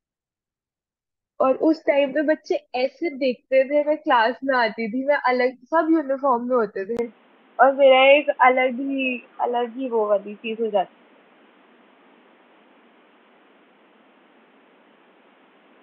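At 6.97 s the speech drops out for about 20 ms and returns dull and boxy, with nothing above 3.8 kHz, a level shift of roughly 5 dB and a new noise floor. This points to an input switched to a poorer device, likely a different microphone or a headset's call profile.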